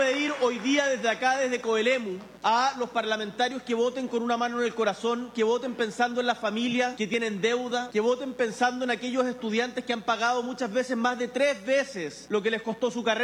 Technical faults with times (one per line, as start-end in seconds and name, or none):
0.00-13.24 mains buzz